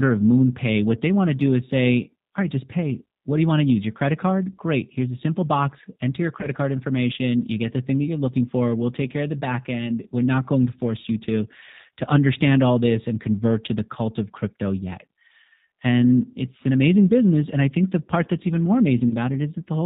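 Throughout, the speech carries plainly audible G.729 codec damage. Nothing passes above 4 kHz, and each frame is rebuilt from a few pulses, giving a rough, synthetic edge that fits 8 kbit/s G.729A rather than plain band-limiting. At 6.41 to 6.49 s and again at 19.09 to 19.15 s, VoIP packet loss concealed by the speech codec stretches the last sound into a fading buzzy tone or coloured noise, with the speech staying weak briefly afterwards. Each fits one lost 20 ms packet. Unlike a plain dropout, neither event leaves silence.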